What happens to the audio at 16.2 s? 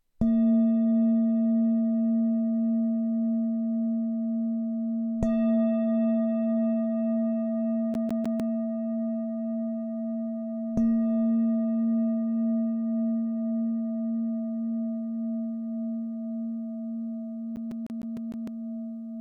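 Nothing goes wrong at 16.2 s; the audio there plays through intact, with no audible fault.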